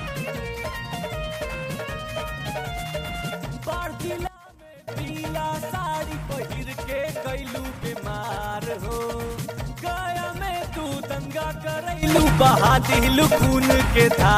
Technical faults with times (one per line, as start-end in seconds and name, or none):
4.27-4.88 sudden gain jump
12.03-14.37 sudden gain jump